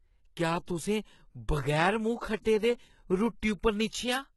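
A speech clip with heavy codec damage throughout. Nothing is present above about 11.8 kHz. The upper band sounds synthetic, with sibilants gritty and metallic. This is likely HE-AAC compression at a very low bitrate, consistent with about 16 kbps. The treble is rebuilt by copying lower bands upward, so harmonics fail to line up. There is also pre-echo from 2.42 to 2.45 s. A short hiss spreads about 34 ms ahead of a sharp attack, which sounds smeared. The codec spread its noise across the whole block, including the quiet lead-in.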